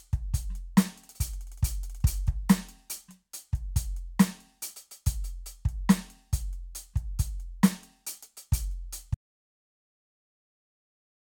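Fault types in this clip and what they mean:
Audio dropout to silence: The music cuts off abruptly at about 9.15 s and never returns. The remaining 2.2 s are pure silence, with no room tone or decay. The input was likely lost while the recorder kept writing zeros.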